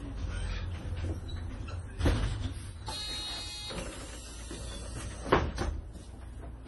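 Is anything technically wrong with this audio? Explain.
Yes. Throughout the clip there is heavy damage that is likely MP3 compression at a low bitrate, consistent with roughly 32 kbps. Nothing is present above about 11.4 kHz, where the encoder cut the treble, and weak frequency components flicker on and off between frames, giving a watery, swirly texture with smeared attacks.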